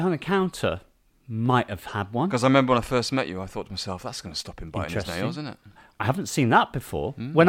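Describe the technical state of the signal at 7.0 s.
At 7.0 s the speech signal is intact, with no audible technical fault at that moment.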